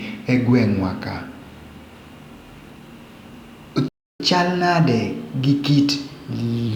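At 3.88 s the speech cuts to silence for about 316 ms, until 4.20 s, a playback stall, likely from the player running out of buffered data. From 4.20 to 6.68 s there is catch-up at higher speed: the backlog is resampled at 1.1 times normal rate, so delivery quickens and pitch rises by roughly one and a half semitones before returning to normal.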